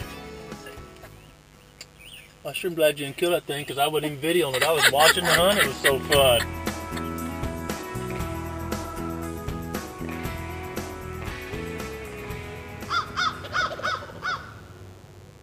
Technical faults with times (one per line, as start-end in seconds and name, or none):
0.00-15.42 mains buzz